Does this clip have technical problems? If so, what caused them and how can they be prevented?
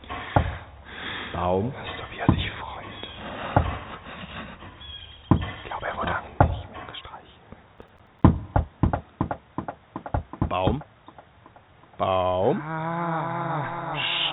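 Yes. The skip ahead at 6.12 s is an abrupt forward jump. Roughly 0.4 s of audio is simply gone, and the two sides are butted together with no filler, so the sound lurches forward. Later audio was already queued, and the jitter buffer discarded the backlog rather than play it, shortening the delay by about the same amount. A larger or more adaptive jitter buffer, and a network path with less burst delay, would prevent it.

The jitter buffer speed-up runs from 6.27 to 7.23 s. Playback goes at about 110% speed with no change in pitch, so the sound feels briefly hurried. After the jump the buffer still held more than its target. To drain the excess, the receiver trimmed many short pitch-period-sized slices, roughly a tenth of a second in total. Steadier packet arrival, or a gentler catch-up rate in the buffer's time-stretching, would keep this from being heard.

The processor overload crackle runs from 7.78 to 8.24 s. 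It is a gritty burst of clicks riding on the sound, all within this G.711 mu-law call path's 4 kHz band. The audio thread repeatedly missed its deadlines, and each miss left a hard-edged gap of silence. The spacing fits a buffer of about 5 ms, with around ten deadlines missed. Reducing CPU load, raising the audio thread's priority or using larger buffers would prevent it.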